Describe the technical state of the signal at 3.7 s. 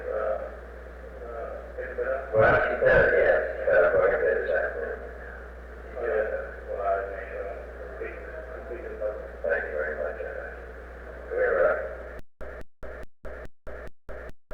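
At 3.7 s the signal is intact, with no dropout, clipping, distortion or other technical fault.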